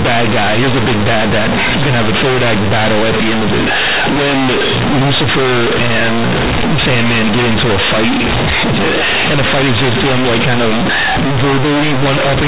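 From start to end the speech is blasted into a harsh, buzzing roar, with quiet passages pushed up as loud as the strongest syllables and a heavy noise bed filling every pause. This is companded audio read as linear: the A-law bytes from G.711 telephone coding are played as plain 8-bit samples without expansion, so each sign change throws the waveform across roughly half its range and the shape of the signal is badly bent.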